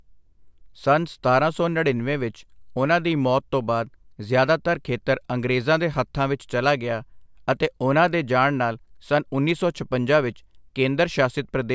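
No technical faults can be heard anywhere in this speech recording; the signal stays continuous and intact from its opening to its close.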